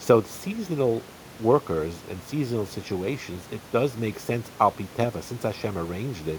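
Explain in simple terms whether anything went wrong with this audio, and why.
Nothing went wrong with the signal itself: the speech comes through intact, and the faint background noise you can hear sitting well underneath it is simply the natural sound of the room the microphone was in, not a problem with the recording system.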